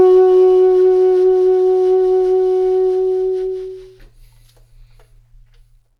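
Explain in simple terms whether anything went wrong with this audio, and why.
Listening through this music, nothing stood out as having gone wrong at any point.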